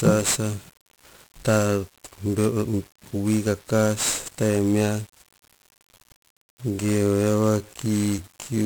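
Throughout the speech, 1-bit DFPWM compression is heavy: each sample is reduced to a single up-or-down step of an adaptive level, so broadband quantisation noise covers everything. The sound is fuzzy and crackly, with the treble lost under hiss, which fits a 48 kbps stream.

From 5.66 s to the end, the pace abruptly drops to about 0.54 times normal speed while the pitch stays the same, and the audio drags. This is likely a time-stretched section, where short pieces were repeated to lengthen the audio without changing its pitch.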